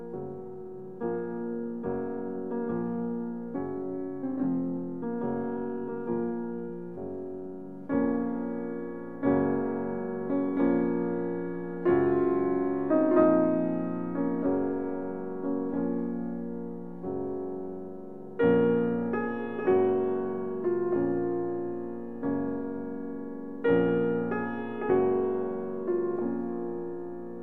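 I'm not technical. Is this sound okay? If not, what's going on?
No. From the start to 7.68 s there's a time-stretched section: software likely squeezed that stretch to run about 1.54 times faster, keeping the pitch steady by dropping tiny slices. The opening sounds rushed, then the pace abruptly relaxes.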